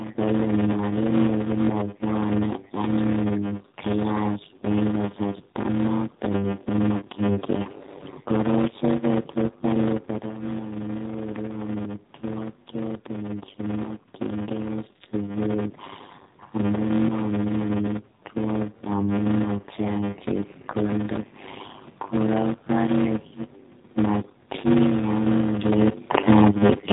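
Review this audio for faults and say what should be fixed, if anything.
Block size mismatch (padded), throughout: short blocks are zero-filled, giving a 100 Hz buzz and speech slowed to 0.533 times, which fits 256-sample writes into 480-sample reads. The waveform shows regular silent notches.

AMR narrowband mobile codec, throughout: the sound points to AMR-NB at about 7.4 kbps. It is buzzy and synthetic, with the spectrogram cut off sharply at 4 kHz.

Lost AMR speech frames, 6.98 to 7.04 s: what sounds like a single dropped frame was concealed by repeating faded parameters. It is heard as a brief warble and dip and appears as a small smeared gap.

The room noise and the level shifts near 10 and 25.5 s, where the talker moved, are part of the recording. To prevent these faults, match block sizes between stages, use a higher-rate or wideband codec, and improve the radio link or add error protection.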